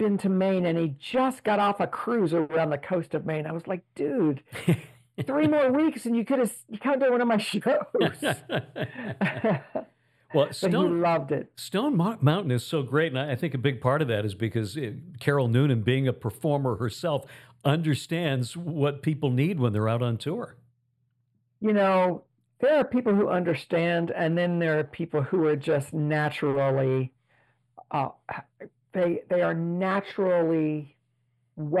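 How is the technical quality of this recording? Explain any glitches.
The recording has one fault that runs through the whole clip: channel delay (comb filtering). One channel arrives a few samples late, roughly a few hundredths of a millisecond, and summing to mono cancels shared content near 7 kHz. The top end sounds dull and hollow. A spectrogram would show a steady dark band around 7 kHz.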